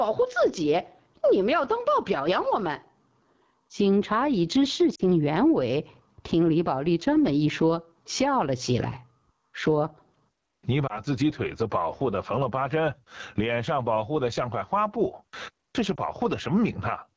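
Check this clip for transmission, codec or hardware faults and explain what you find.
Yes, there's plenty here: level pumping, a rough low-rate codec, and three short dropouts.

Gain pumping runs throughout. The level ducks by about 20 dB under loud moments, likely from a limiter fighting gain set too high.

The AMR wideband (HD Voice) codec sits at 8.85 kbit/s, one of its two lowest rates, so the speech sounds plainly rough and raspy.

Lost AMR speech frames show up at 4.95–5.01 s, 10.88–11.01 s and 15.96–16.11 s. The decoder stretches the last good sound and fades it, giving brief dips or warbles. The first one is about 40 ms of missing audio, which fits two 20 ms frames. The others are about 20 ms each.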